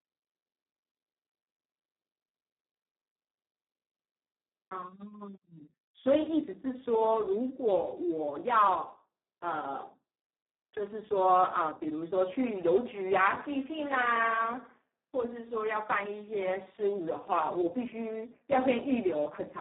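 From start to end the speech carries heavy Speex codec damage. It sounds hoarse, noisy and robotic, which fits a bitrate near 4 kbps. Too few bits reach the excitation. The band spans 200 Hz to 3.5 kHz, with nothing above 3.8 kHz.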